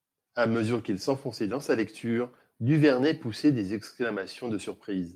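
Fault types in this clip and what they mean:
Lost packet rebuilt from error correction: one packet went missing at 4.21 to 4.23 s, just after "poussait des", and the decoder substituted the low-bitrate copy carried in the following packet, so no gap is heard, only a brief 20 ms patch of rougher, noisier speech.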